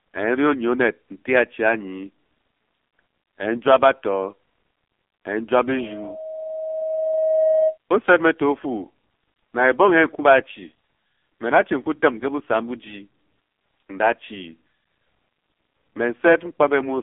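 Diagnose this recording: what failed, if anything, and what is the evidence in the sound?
The codec stage failed throughout: the speech is heavily damaged by the AMR narrowband mobile codec. Nothing above 3.8 kHz survives, the line band sits around 250 Hz to 3.5 kHz, and the buzzy, synthetic timbre fits a low mode near 5.9 kbps.

Loudspeaker feedback squeal occurs at the playback and microphone stage from 5.7 to 7.78 s. A single 635 Hz tone swells over about two seconds until it is roughly as loud as the speech. Loop gain above one at that frequency lets it grow unchecked.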